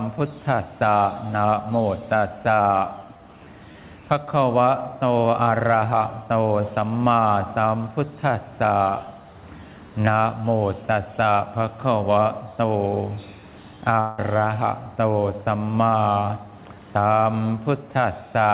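From 14.00 to 14.21 s comes what is likely a long network dropout. About 0.18 s of audio is lost and bridged by a fading buzz copied from the preceding sound, with no silence. A spectrogram shows smeared, repeating bands decaying in level before the sound resumes with that portion gone.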